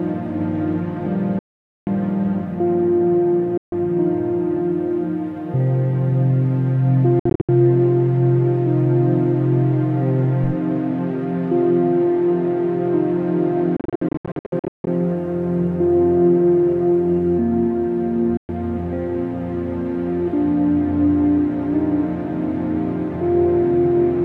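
Sharp silent gaps at 1.39–1.87 s, 3.57–3.72 s, 7.19–7.49 s, 13.77–14.87 s and 18.37–18.49 s are likely Bluetooth dropouts. Late packets were discarded, and each time the sound resumes further along, skipping what was lost. The third and fourth gaps are broken into short bursts rather than single holes.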